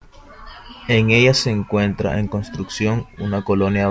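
Speech, with nothing technically wrong with it.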